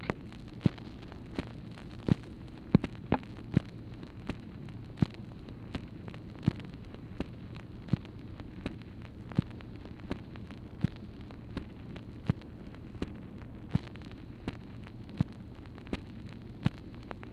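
No technical faults can be heard in this recording.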